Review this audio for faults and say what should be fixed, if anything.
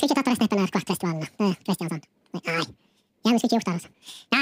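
The decoder stepped through the file two samples at a time, treating each pair as a single frame, which points to mono data being read as stereo or a sample-width mismatch. This is audio read two samples at a time (double speed), and it lasts the whole clip: the speech runs twice as fast and sits 12 semitones, a full octave, too high. Matching the reader's channel count and sample format to the file's header before decoding would prevent it.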